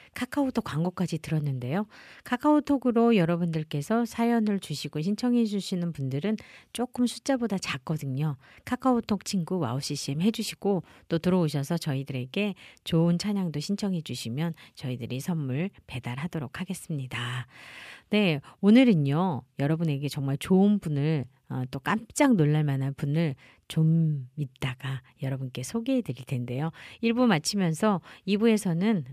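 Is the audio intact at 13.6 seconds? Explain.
Yes, the speech at 13.6 s is intact, with no dropout, click or distortion at that moment.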